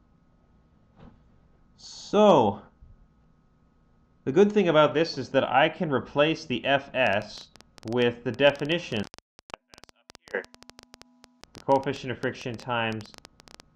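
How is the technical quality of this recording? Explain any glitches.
The recording has one clear glitch. A train of clicks runs from 7.07 s to 13.61 s. It lasts to within a moment of the end. The clicks arrive at about 10.4 per second, with irregular spacing, about seventy in all. Each has much the same sharp shape. The loudest peaks sit roughly 5 dB above the sound itself. They are heard as uneven ticking laid over the audio and in its gaps. The likely cause is interference from nearby equipment or a faulty connection or power supply.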